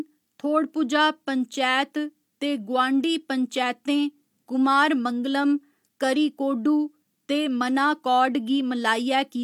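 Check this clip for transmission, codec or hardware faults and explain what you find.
Nothing stands out here; the speech comes across without any transmission, codec or hardware trouble that I can hear.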